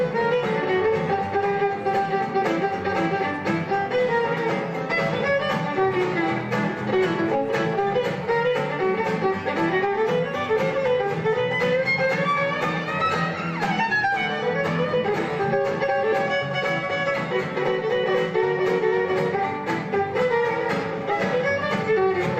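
No technical faults can be heard anywhere in the recording. Nothing in the audio calls for a timestamp or a remark.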